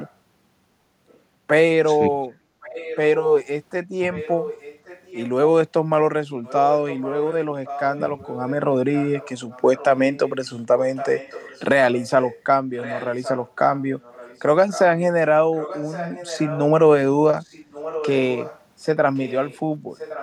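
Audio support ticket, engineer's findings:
Echo leak at 0.00–0.13, 1.08–1.19, 2.61–3.47, 4.13–5.29, 6.43–14.8, 15.59–16.6 and 17.39–20.22 s. A second copy of the speech trails 1115 ms behind, at about −30 and −35 dB relative to the speech at first, then rising to about −15 dB and finally about −10 dB. It is likely residual echo from a far-end loudspeaker that the canceller did not remove. On a spectrogram it shows as a ghosted, repeated harmonic pattern, offset in time.

Background gated by the echo canceller at 2.48–2.59 s, about 100 ms. The room noise dips by about 6 dB while the far-end loudspeaker plays: the canceller suppresses the microphone. It shows as a brief notch in the noise floor on the waveform and spectrogram.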